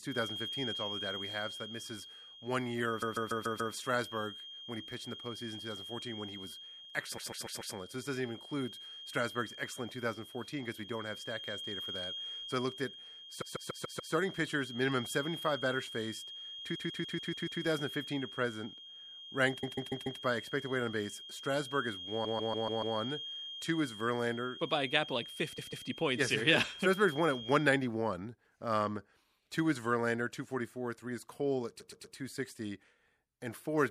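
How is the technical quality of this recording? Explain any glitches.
The quality is compromised by two faults: a persistent whistle and repeated stutters in the speech.

Feedback whistle, 0.0 to 27.7 s: a thin 3.2 kHz tone about 10 dB below the speech, swelling and fading slowly. It is likely a loudspeaker-to-microphone loop held just at the edge of feedback.

Repeated frames at 3.01–3.73, 7.17–7.74, 13.41–14.13, 16.74–17.61, 19.62–20.20, 22.24–22.96, 25.57–25.86 and 31.79–32.15 s: a 144 ms chunk of compressed audio (120 ms in the last) replays two to six extra times. This causes a stutter and lengthens the clip.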